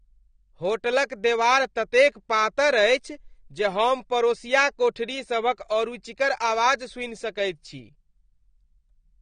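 Speech, and the whole thing carries plainly audible AAC compression damage from start to finish. Nothing gets above about 9.7 kHz, so the top end is just gone and the voice sounds dull, with that smeared, warbly, fizzy edge on sibilants and held sounds. It's most likely AAC-LC squeezed hard, around 32 kbps, where the encoder drops the cut-off and starves bands of bits to stay inside its budget.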